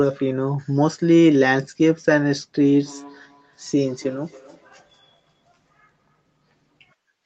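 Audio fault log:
2.82–6.45 s, feedback echo between two devices: the speech returns at a steady interval of roughly a third of a second, thin and ringing, at its loudest about 26 dB below the direct speech. A second device in the room is playing this call aloud, and its sound reaches the microphone again, where the local echo canceller cannot remove it. A spectrogram shows faint delayed copies trailing each syllable, limited below 8 kHz like the rest, and the waveform shows low ripples filling the pauses.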